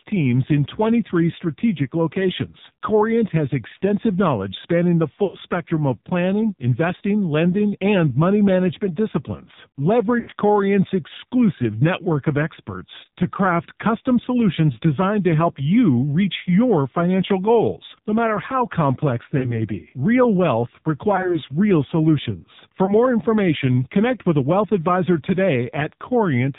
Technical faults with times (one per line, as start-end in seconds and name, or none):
0.00-26.59 AMR narrowband mobile codec
5.24-5.38 lost AMR speech frames
10.20-10.31 lost AMR speech frames
19.38-19.55 lost AMR speech frames
21.16-21.41 lost AMR speech frames
22.86-22.96 lost AMR speech frames